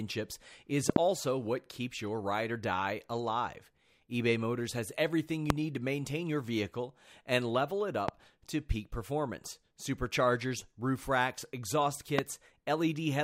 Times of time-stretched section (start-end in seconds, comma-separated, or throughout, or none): none